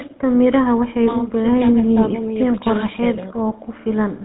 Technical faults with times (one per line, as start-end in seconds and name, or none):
0.00-4.24 GSM full-rate codec